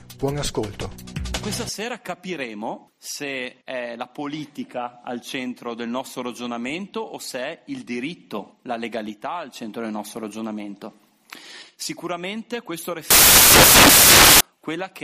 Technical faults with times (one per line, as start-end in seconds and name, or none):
13.10-14.40 samples built from the wrong bytes